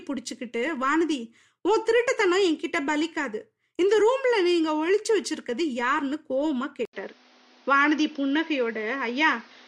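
At 6.85 s the speech drops out for 80 ms. After the gap it continues to the end with nothing above 6.5 kHz. The tone turns duller, with faint new background noise. Loudness barely changes. The input likely switched to a poorer device.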